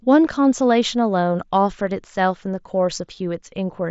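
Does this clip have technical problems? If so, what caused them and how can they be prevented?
No, the speech carries no faults, and its top end stops near 7.7 kHz, as expected from a wideband Bluetooth headset link running the mSBC codec.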